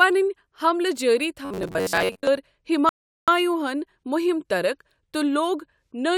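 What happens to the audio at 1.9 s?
At 1.9 s the speech has a robotic sound from repeated short buffers. It runs from about 1.45 to 2.28 s. The voice turns into a rigid, metallic buzz pitched at 93.8 Hz, which still loosely tracks the speech. The likely cause is late-arriving audio. The playback loops the last fragment of roughly 10.7 ms to fill the gaps. Most of the span is such repeats, so the missing audio is simply skipped.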